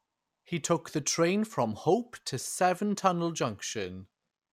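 No technical faults can be heard anywhere in the recording: the signal holds steady, with no dropouts, glitches or distortion at any point.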